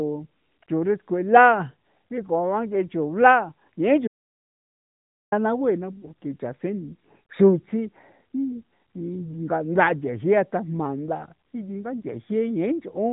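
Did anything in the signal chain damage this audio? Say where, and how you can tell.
Yes. The input or driver stage likely lost its source, and the recorder kept writing silence: an audio dropout to silence from 4.08 to 5.32 s, about 1.24 s of dead air with no room tone.

At the network stage, lost AMR speech frames at 5.98 to 6.10 s: the decoder concealed about 40 ms, which fits two 20 ms frames, leaving a brief warbling dip in the narrowband speech.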